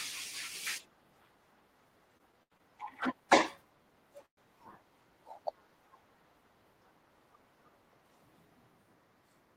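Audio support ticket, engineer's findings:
Repeated stalls (stutter), 2.17–2.62 s. Four short hold-ups, longest 85 ms, about 140 ms of continued sound in total, roughly a third of that span. Jitter buffer repeatedly running dry as packets arrive late; receiver extends last sound each time. Nothing lost, delivery drags.

Call audio freeze, 4.26–4.39 s. Sound halts for about 116 ms, with roughly 100 ms falling to silence after the continued tail fades. Likely cause: packets held up in transit, emptying the jitter buffer. Playback resumes where it stopped, now about 116 ms later.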